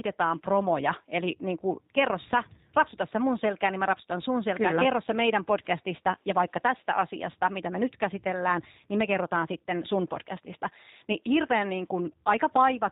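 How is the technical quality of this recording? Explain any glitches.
Technical quality is limited by plainly audible codec damage across the whole clip. Throughout, the speech sounds muffled, slightly rough and synthetic: this is the G.729 codec, likely the G.729A variant at a rate that fits 8 kbit/s, rebuilding the voice from a vocal tract model and sparse pulses, with nothing above 4 kHz.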